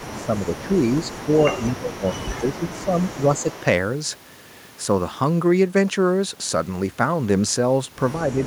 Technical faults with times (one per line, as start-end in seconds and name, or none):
0.00-3.62 echo leak
0.16-0.70 speech suppressed in double talk
1.68-3.49 speech suppressed in double talk
8.28-8.47 speech suppressed in double talk